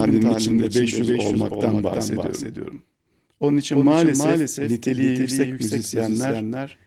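Throughout, the speech carries a doubled audio track: a dry copy about 5 dB quieter and about a third of a second late, likely a second capture path, without echo's decay.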